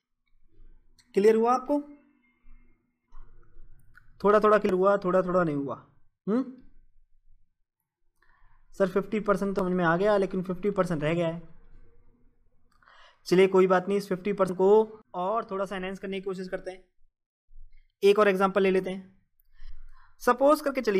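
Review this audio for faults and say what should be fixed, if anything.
Three abrupt skips at 4.69, 9.59 and 14.49 s, each dropping roughly a tenth of a second and splicing the sides straight together, point to audio missing between chunks, likely from a recorder losing samples while switching between 5-second blocks. Fix it by double-buffering so the next chunk starts capturing before the current one is closed.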